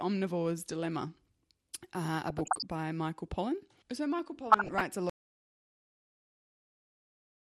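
Throughout, the speech was likely squeezed through MPEG Layer II coding at a low rate around 80 kbps, so upper sub-bands drop out, leaving it dull, grainy and gurgling: plain MP2 compression.

From 2.28 to 2.65 s and again from 4.50 to 4.83 s, bit errors slip past error correction into the audio frames, producing DAB burbling: short noisy blips in single sub-bands over the speech.

At 5.10 s the input was likely lost while recording continued, so the sound cuts off into an audio dropout to silence: dead digital silence, without any room tone, running to the end.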